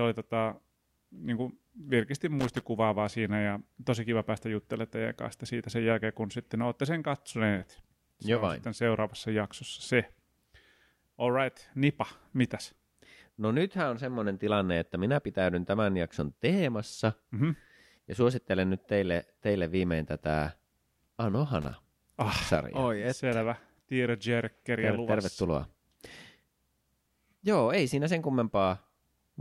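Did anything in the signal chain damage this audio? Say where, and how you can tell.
Yes. Loose connector crackle from the analogue wiring. Irregular crackle bursts occur at 2.39 to 2.61 s, after "tota niin kuin virkisti", and at 21.62 to 21.74 s, before "ah sarjaa". A moving contact chops the speech intermittently. Any DC adds pops.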